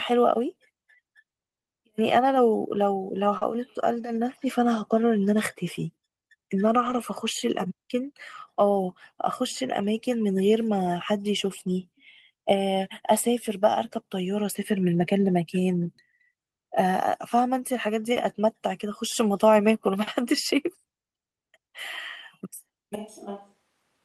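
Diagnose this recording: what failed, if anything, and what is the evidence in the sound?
At 3.37 to 3.43 s the sound smears briefly for about 40 ms, a short wobble where the real signal stops. This is short concealed packet loss at the network stage: audio arrived too late, and the decoder extended the preceding sound to cover the hole before blending back.

Overlapping the end of that smear, 3.41 to 3.43 s turns rough and grainy for 20 ms, and 6.81 to 6.99 s sounds rougher and noisier for 100 ms. These are lost packets rebuilt from error correction in the codec: the decoder played low-bitrate backup copies from the following packets.

From 22.95 s to the end the speech suddenly turns hollow and roomy, about 10 dB quieter, thinner in the bass, with room noise rising to within roughly 35 dB of the speech. This is likely a switch to a distant microphone at the capture stage.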